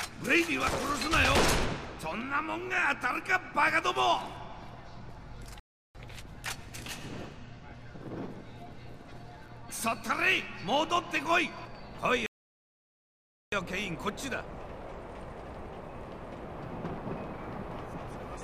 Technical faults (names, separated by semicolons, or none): playback stall